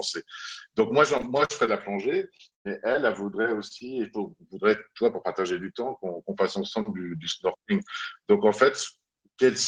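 Speech, with two stretches of repeated packet loss (robotic sound) early on. From 1.17 to 1.69 s, four gaps totalling about 100 ms were filled by extending the preceding audio, the longest lasting 43 ms, so roughly a fifth of that span is synthetic. From 2.37 to 2.96 s it is worse: four gaps totalling about 180 ms, one of them 117 ms, covering nearly 30% of the span. The rapid alternation of real and extrapolated audio gives a choppy texture with fragments missing. Shortly after, three instances of short concealed packet loss occur at 3.42 to 3.46 s, 3.68 to 3.72 s and 3.78 to 3.82 s. In each, about 20 ms of audio never arrived in time, and the decoder bridged the hole by continuing the last pitch or noise shape before crossfading back. The result is a brief smear or wobble at each point.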